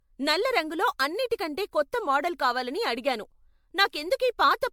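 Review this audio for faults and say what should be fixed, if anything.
Generation loss runs through the whole speech clip. It sounds swirly, smeared and hollow, with blurred attacks. Content stops near 19.9 kHz. This likely comes from MP3 encoding repeated about seven times, near 96 kbit/s, each pass adding fresh quantisation noise and spectral holes. Prevent it by editing from a lossless master and encoding only once.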